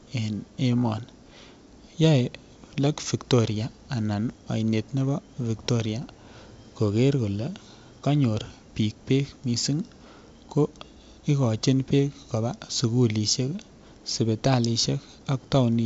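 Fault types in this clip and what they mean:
No faults can be heard anywhere in this speech.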